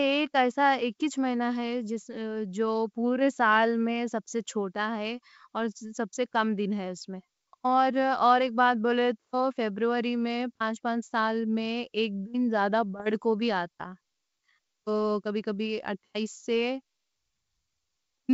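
From 12.98 to 13.02 s, just before "کوں بھی", the speech breaks into a short rough burst with pops and a brief jump in level: bit errors on an ADPCM link in the G.722 stream. The flipped bits knock the decoder's step size and predictor off track, so each error keeps ringing for some milliseconds. On a spectrogram this shows as a thin broadband smear, and on the waveform as jagged spikes with an uneven envelope.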